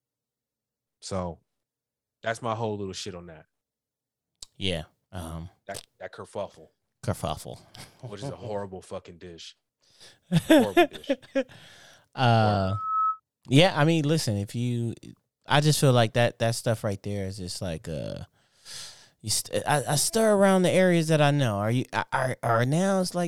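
At 12.59 s a loudspeaker feedback squeal rises out of the speech: a single tone near 1.3 kHz swells over roughly 0.4 s to about the level of the speech, then stops at 13.20 s. That swelling build-up is what distinguishes it from a steady interfering whistle.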